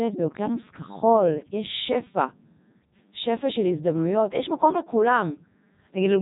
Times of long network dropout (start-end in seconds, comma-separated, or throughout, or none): none